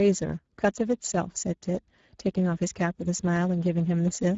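From start to finish the speech carries Speex codec damage. A low bitrate, around 10 kbps, starves the excitation, so voices come out plainly hoarse and grainy, and everything above about 7.7 kHz is simply gone.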